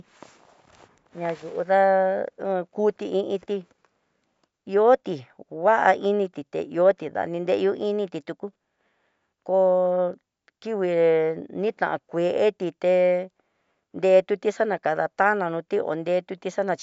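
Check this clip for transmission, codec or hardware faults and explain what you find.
Nothing in the speech recording points to a transmission, codec or hardware problem; the signal holds steady with no audible disturbance anywhere along it.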